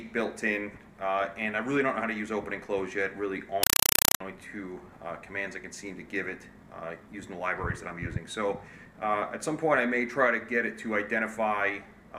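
From 3.63 s to 4.20 s, the sound gives way to a compressed stream played as audio. A Dolby Digital stream on the digital link was taken for plain samples and never decoded. Each frame came out as a short burst of noise, about 4 ms long, then silence. The bursts repeat 31.25 times a second. The result is harsh, very loud chattering static. The pattern fits an AC-3 stream at around 192 kbps.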